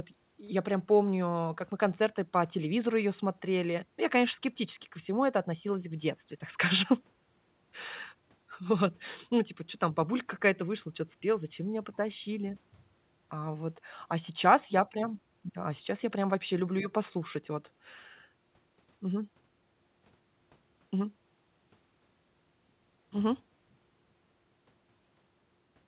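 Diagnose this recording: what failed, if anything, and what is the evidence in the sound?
Nothing failed; the recording shows no faults.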